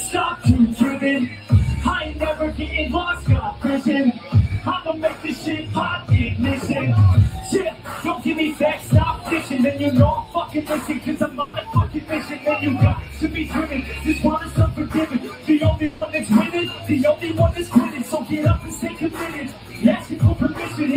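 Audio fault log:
Throughout: noise suppressor applied to music or sounds. A speech-tuned suppressor treats sustained content as noise, so held tones and tails sink and recover, a level swing of around 10 dB. On the waveform the envelope pumps; the spectrogram shows sustained bands fading while onsets stay bright.
1.29–1.5 s, 4.16–4.31 s, 5.14–5.46 s, 7.72–7.89 s, 15.13–15.49 s, 18.9–19.19 s, 19.48–19.83 s, 19.99–20.17 s: sound cut by the noise suppressor. Each passage is misjudged as noise and pulled down by about 6 to 7 dB, so it dips or thins. Waveforms show brief notches in amplitude; spectrograms show sustained energy dimming across bands.
11.41–11.55 s: burst of packet loss. About 120 ms of audio never arrived; the receiver stretched the last sound into a fading buzz or hiss, then resumed further on with that stretch missing. The spectrogram shows smeared, repeated frames and an abrupt jump where audio returns.
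15.85–16.03 s: long network dropout, likely the cause. Roughly 160 ms is replaced by a continuation of the preceding sound that decays away, and audio then picks up later with that part gone. The waveform shows a decaying tail; the spectrogram shows frozen, blurred bands before a hard discontinuity.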